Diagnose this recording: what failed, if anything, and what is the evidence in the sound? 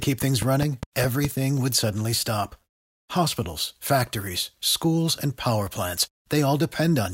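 A train of clicks runs over the opening speech, from 0.03 s to 1.26 s, just before "would suddenly stop". There are about seven of them, evenly spaced at roughly 4.9 per second, each much the same shape and poking out around 10 dB above the voice. That steady, repeating pulse points at the analogue side, likely interference coupling into the wiring from nearby equipment or a faulty connection or power supply, injecting a spike on a regular cycle.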